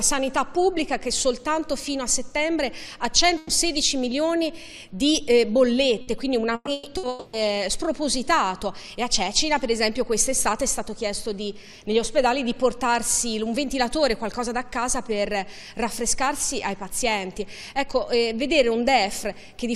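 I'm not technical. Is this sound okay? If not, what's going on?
No. There are several bursts of packet loss, at 3.37, 6.01, 6.55, 6.73 and 6.97 seconds. Each time, a tenth of a second or so of sound goes missing. A smeared buzz or hiss covers the hole, and at 6.55 it also drops briefly to silence.

From 7.09 to 7.36 seconds, the audio is replaced for about a quarter of a second by a held, fading smear. Then it jumps ahead. The likely cause is a long network dropout, where nothing arrived for that stretch.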